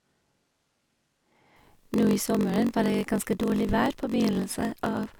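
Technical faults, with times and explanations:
throughout: block size mismatch (padded). A steady buzz at 46.9 Hz runs under the speech, and everything plays at 0.938 times normal speed while keeping close to its normal pitch. A short stretch of silence is padded into every block, which fits a stage reading 1024-sample blocks that are not completely filled. A sample-rate mismatch would shift pitch along with speed. Here, the unchanged pitch and a buzz locked to the block rate point to padding.
0.0 to 1.56 s: switch to a distant microphone. From the start of the clip until 1.56 s, the speech sounds roomy and hollow, thinner in the bass, and about 10 dB quieter. Room noise sits roughly 30 dB below the speech. At 1.56 s, the sound snaps back to a close, full presence, so the close microphone was likely missing for this stretch. A plain gain drop would not also add room sound and noise. Added reverb would not end with such an abrupt change of tone.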